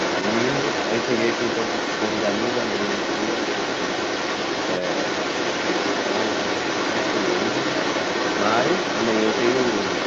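Throughout, the echo canceller likely left loudspeaker playback in the microphone, so the other side's voice leaks through, about as loud as the talker.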